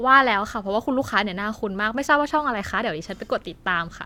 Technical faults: none

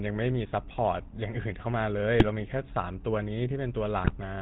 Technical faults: GSM full-rate codec; GSM bit errors

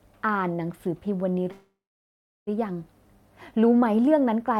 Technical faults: call audio freeze

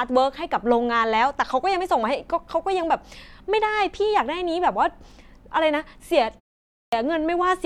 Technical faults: clipped start after a pause

